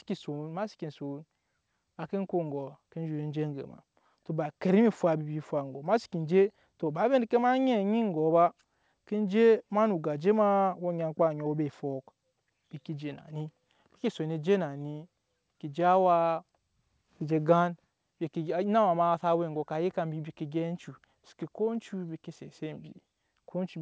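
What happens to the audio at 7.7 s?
Nothing goes wrong at 7.7 s: the speech is intact there, carried through the call path with its normal band limit and nothing above 8 kHz.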